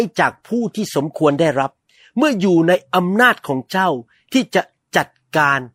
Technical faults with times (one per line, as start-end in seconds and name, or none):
none